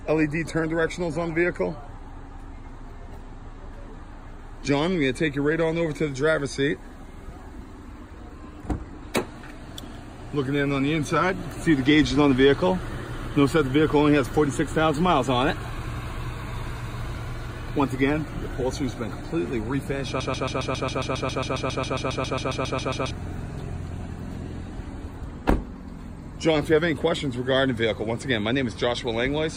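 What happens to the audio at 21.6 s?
At 21.6 s the sound stutters: one 136 ms fragment repeats exactly, back to back, 21 times from 20.20 to 23.11 s. This is a broken-record loop. Playback likely stalled and kept resending its last fragment, so the audio due then is lost.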